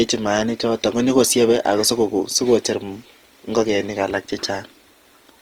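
All the way through, the speech has that grainy, rough texture you get when a codec is starved for bits, and it's plainly audible. That's likely Opus compression in its music mode. Band energies are kept, but the detail inside starved bands gets filled with folded or noise-like content, so harmonics turn coarse rather than swirly. The band still runs fullband, up to about 20.4 kHz, and the damage fits a rate somewhere around 24 kbps.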